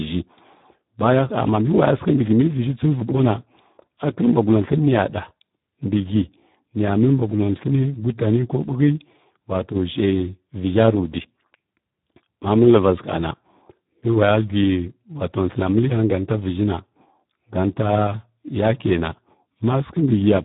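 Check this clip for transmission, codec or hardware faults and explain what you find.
One codec fault runs through the whole recording. The speech carries heavy Speex codec damage from start to end. Speex is a CELP coder. It models the voice with a filter driven by a coded excitation. At this setting the excitation gets very few bits, which fits a bitrate around 8 kbps. The speech sounds hoarse, noisy and buzzy, edging toward robotic. Nothing remains above 3.8 kHz, so the sound is narrowband and dull.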